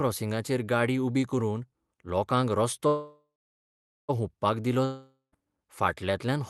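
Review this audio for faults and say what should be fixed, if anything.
Call audio freeze from 2.87 to 4.11 s: the sound stalls, and the last fragment is stretched into a fading buzz that settles into about 0.79 s of silence before the speech resumes exactly where it left off. Nothing is lost, but roughly 1.2 s of delay is added, most likely because packets were held up and the jitter buffer ran dry. A larger or adaptive jitter buffer on a steadier network route would prevent it.

Long network dropout from 4.85 to 5.34 s: the audio breaks off, and the receiver covers the gap with a decaying hiss that drops to about 0.11 s of silence. The speech then returns further along, with roughly 0.48 s of it gone for good, which points to a likely stretch of lost packets that never arrived. Forward error correction or redundancy in the Opus stream, plus a more reliable connection, would prevent it.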